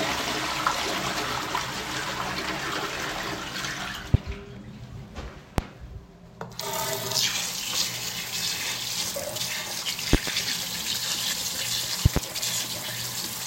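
Sharp, loud pops break out of the audio four times. Single hits land at 4.14 s and 5.58 s. Quick doubled pops follow from 10.13 to 10.30 s and from 12.06 to 12.19 s. Each stands roughly 25 dB above the surrounding sound, which carries on underneath without a break. This is loud pop, likely a sudden voltage step or pulse from a connector, switch or static discharge entering the signal path and being shaped into a thump by the circuitry after it.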